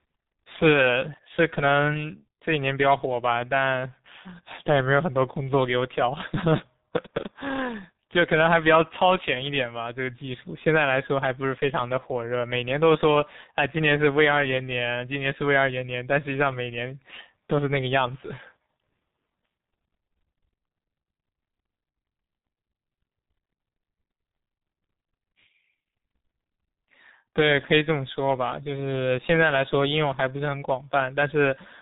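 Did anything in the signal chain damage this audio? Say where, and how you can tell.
Yes, at the codec stage: the G.723.1 codec runs throughout. Nothing gets past 3.8 kHz, and the speech sounds heavily muffled and hoarse, which fits roughly 6 kbit/s with slow 30 ms frames.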